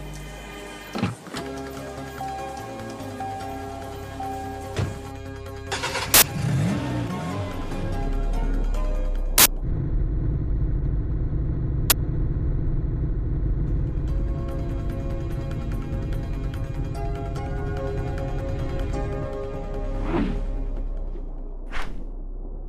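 Loud cracks or bursts of digital noise at 6.14–6.22, 9.38–9.46 and 11.90–11.92 s come from an uninitialised buffer playing leftover memory, rather than the silence a dropout leaves.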